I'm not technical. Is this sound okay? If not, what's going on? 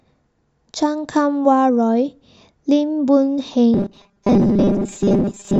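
No. From 3.74 s to the end, the speech becomes a rigid, metallic buzz at 200 Hz: robotic sound from repeated short buffers. New audio likely arrived too slowly, so the software kept replaying tiny 5 ms pieces and skipped most of the real speech.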